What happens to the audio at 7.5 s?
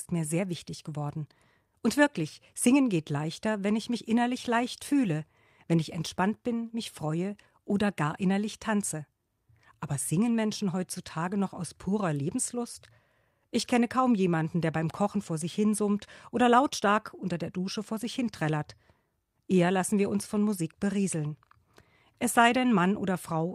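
Nothing goes wrong at 7.5 s: the speech carries on intact through that moment, with no dropout, click, distortion or other fault.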